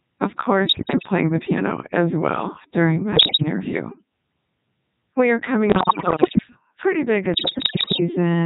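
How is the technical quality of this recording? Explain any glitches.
The quality is poor: heavily vocoded speech with four bursts of digital radio corruption.

Codec 2 vocoder, throughout: the speech is rebuilt from pitch, voicing and spectral-envelope parameters at about 3.2 kbit/s rather than from the waveform, so it sounds robotic and buzzy.

Bit errors on digital voice radio, at 0.64–1.10 s, 3.16–3.42 s after "as well during my", 5.70–6.47 s between "are coming" and "pretty big", and 7.34–8.00 s after "pretty big": roughly one bit in ten to one in five is flipped, corrupting whole frames' parameters. The result is sudden pitch and level jumps, warbles and bleeping gibberish.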